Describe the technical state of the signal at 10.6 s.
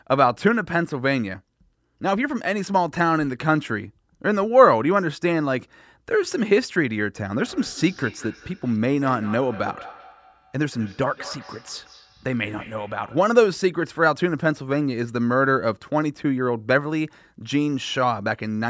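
At 10.6 s the speech comes back as thin, ringing repeats about a fifth of a second apart, up to about 19 dB below the direct sound. This feedback echo between two devices, running from 7.36 to 13.43 s, happens because one device replays another's microphone into the same room, and that microphone's echo canceller cannot remove it, since it only removes what its own device plays.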